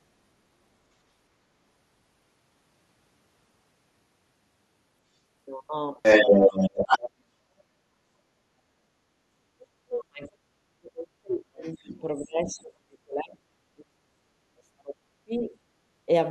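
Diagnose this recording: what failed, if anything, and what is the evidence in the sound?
Other side's voice leaking through, from 6.02 to 7.1 s, with brief faint scraps at 11.62, 12.47 and 15.36 s. This is a call-processing failure. A second voice is heard in the channel, and the first stretch is roughly 10 dB louder than the talker. It was likely loudspeaker pickup that the echo canceller failed to remove from the microphone signal.

Speech suppressed in double talk, from 9.41 to 10.58 s and from 10.77 to 15.54 s. This is also a call-processing failure. The talker's level dips, by as much as about 40 dB at the deepest points, while both sides speak. The likely cause is an echo canceller that could not separate the talker from the echo and turned both down.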